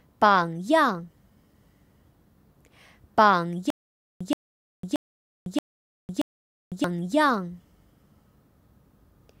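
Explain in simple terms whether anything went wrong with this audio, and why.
Stutter with silent gaps, 3.70 to 6.84 s: a 125 ms burst repeats five times between half-second silences, likely a stalled stream replaying its last fragment.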